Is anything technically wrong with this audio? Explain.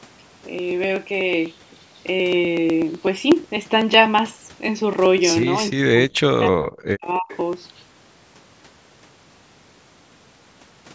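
Yes. From 0.09 to 10.88 s, regular ticks sound every 0.124 s, roughly a hundred in all. These are periodic USB or driver dropouts: about 1 ms of audio is skipped each time the bus or driver stalls.

From 5.71 to 7.3 s, the speech dips, falling by as much as about 40 dB over roughly a second. This is speech suppressed in double talk, likely from an echo canceller attenuating both sides while they overlapped.

From 7.29 to 7.37 s, a faint copy of the speech, about 20 dB down, repeats 306 ms late. This is an echo leak, likely from loudspeaker sound the canceller failed to remove.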